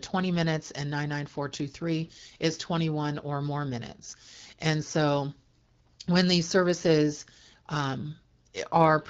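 This is a speech clip with clock slip clicks running almost the whole way through, from 0.12 s to 9.09 s. There's a faint, steady tick roughly every 40 ms, so it blurs into a soft rattle under the voice, around 300 of them in all. That rate points to a clock mismatch of roughly 700 ppm, likely two devices on unsynchronised clocks, each slip dropping or repeating a single sample.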